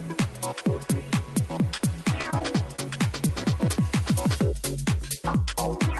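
Around 1.77 to 1.81 s there's a short concealed packet loss. A few hundredths of a second never arrived, and the receiver papered over the hole by stretching the preceding sound before blending back, so you hear a quick smear or wobble rather than silence. From 2.21 to 3.31 s it turns into repeated packet loss, with the classic robotic sound. Dropouts keep landing one after another, the longest about 32 ms. Each gets patched with continued sound, so roughly an eighth of that stretch is synthetic fill, and it comes out choppy.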